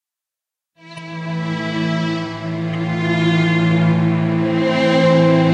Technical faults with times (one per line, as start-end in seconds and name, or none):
0.91-0.99 corrupt frame decoded
2.73 corrupt frame decoded